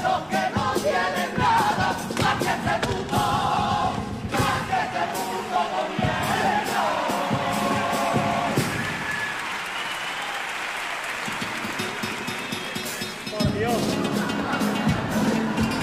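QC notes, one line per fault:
1.58–1.62 s, 3.57–3.61 s and 13.49–13.52 s, overlap between stream segments: you'll hear a small click or skip at each spot. Two neighbouring chunks of the stream were stamped as overlapping, so the player trimmed the overlap, but that sound wasn't actually duplicated. About 30 to 40 ms just vanishes and the waveform jumps across the gap. The events land on what sound like 2-second segment boundaries, which is why the spacing looks regular.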